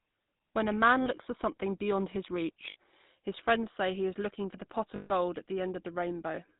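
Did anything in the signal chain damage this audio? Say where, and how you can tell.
Yes, the damage is in the codec and network stages. The whole clip has passed through the GSM full-rate codec. It models the vocal tract and excites it with a sparse, regularly spaced pulse train, keeping only a third of the excitation samples, and passes nothing above 4 kHz. The result here is a plainly audible buzzy, gravelly roughness on the speech throughout, with no high-frequency air, which fits the 13 kbps full-rate coder.

There are also lost GSM frames in three places: 1.02 to 1.08 s (about 40 ms), 2.70 to 2.76 s (60 ms), and 4.96 to 5.12 s (140 ms). At each gap the decoder reused the last good frame's parameters, so the sound smears into a rough, metallic ring instead of continuing cleanly. The longest, at 4.96 s, rings noticeably longer.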